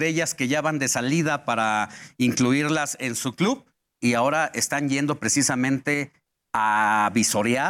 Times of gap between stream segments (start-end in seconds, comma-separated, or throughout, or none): none